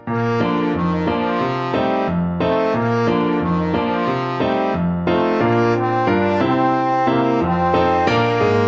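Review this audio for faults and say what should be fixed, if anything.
Nothing here needs fixing: the audio has no content above 8 kHz, which matches the normal band limit of a wideband Opus call path, and the lowest bass is trimmed by the call microphone processing's high-pass filter as expected.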